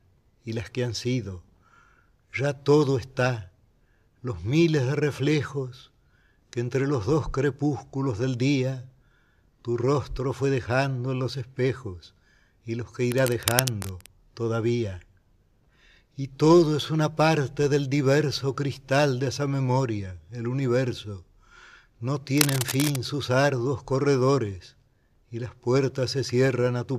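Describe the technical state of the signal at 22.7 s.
A worn cable, connector or control likely shifting changes contact resistance rapidly, producing cable scratch noise from 22.38 to 23.02 s: dense, uneven scratching bursts nearly as loud as the sound.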